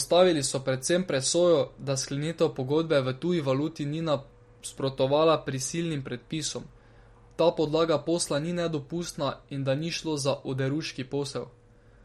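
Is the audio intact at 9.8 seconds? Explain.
No. Throughout the speech, including 9.8 s, there is plainly audible MP3 compression, likely at a low bitrate near 48 kbps: treble stops at 16.1 kHz and weak frequency lines flicker between frames, giving a watery swirl and chirpy s sounds, unlike a simple low-pass filter's steady dullness.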